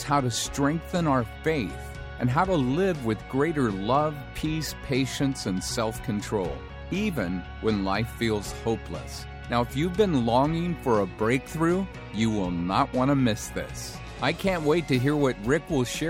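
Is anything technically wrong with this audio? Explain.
Yes. From 0.13 s to 16.07 s there are clock slip clicks: a faint, evenly spaced ticking, roughly every 70 ms, clearest on loud, sustained passages and vanishing in quiet. The likely cause is two devices running on unsynchronised clocks, drifting apart by something near 300 ppm, so a single sample is dropped or repeated each time the gap reaches a whole sample. Unlike buffer dropouts, the ticks are tiny, metronome-steady and leave no audible gaps.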